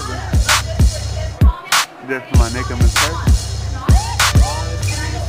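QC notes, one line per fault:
No faults found on this pass.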